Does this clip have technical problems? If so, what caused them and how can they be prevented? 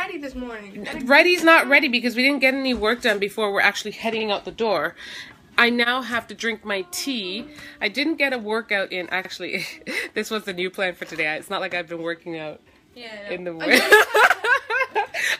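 Yes. Overlapping chunks cause stutters at 4.20, 9.25 and 14.30 s. Each 5-second chunk begins 50 ms early, so that piece repeats. Align chunk boundaries exactly, without overlap.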